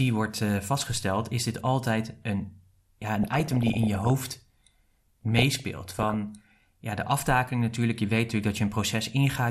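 A speech clip with plainly audible MP2 compression throughout, likely from too few bits (the dullness and gurgle fit about 80 kbps), so upper sub-bands drop out and flicker rather than simply rolling off. DAB burbling, from bit errors getting past error correction, adds short blips of noise in single sub-bands at 3.23 to 4.20 s and 5.21 to 6.16 s. These bursts come and go, unlike the steady codec grain, and the second burst carries a lower error rate than the first.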